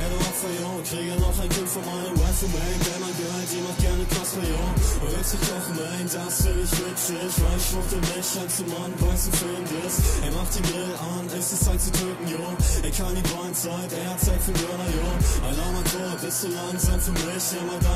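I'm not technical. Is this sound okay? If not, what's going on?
No. From 6.8 to 8.98 s there is crude rate conversion: samples were dropped or repeated without filtering, adding a gritty, unrelated buzz that tracks loud and bright sounds.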